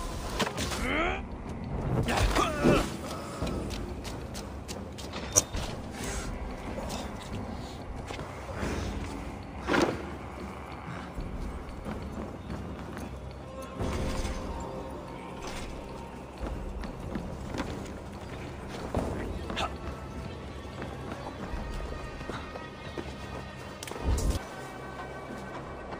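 Four stutters turn up, each one repeated frames, where a short chunk of the compressed stream got played again. At 5.35 to 5.43 s a 10 ms slice repeats three extra times, at 7.20 to 7.24 s twice more, and at 11.70 s once. At 21.26 to 21.29 s a 20 ms stretch, which fits two 10 ms blocks, plays twice. Each repeat is heard as a stutter, and the timing drags by 10 to 30 ms.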